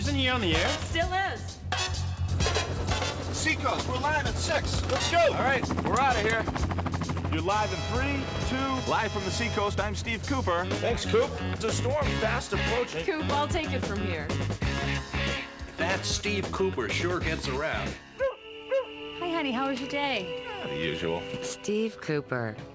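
No technical faults are audible.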